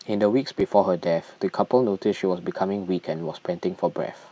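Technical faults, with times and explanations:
0.60 s, block of digital silence: 5 ms of audio cuts out and back without a fade, a gap so short it is heard as a tick or dip rather than silence.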